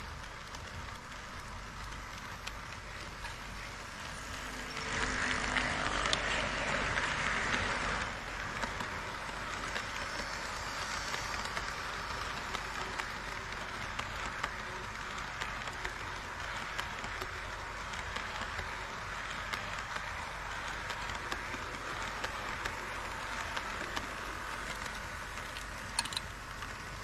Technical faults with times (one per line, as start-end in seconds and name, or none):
4.64-8.30 digital radio blending to analogue